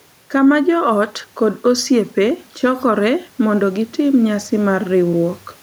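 From start to finish the gain rises and falls, pulled down on each loud sound, with a swing of roughly 5 dB. That room noise sits about 38 dB below the speech. Loud and quiet passages land closer together than they should, giving a squashed, flattened delivery. This is gain pumping, likely from input gain set far too high and a fast limiter or compressor clamping down on every loud sound.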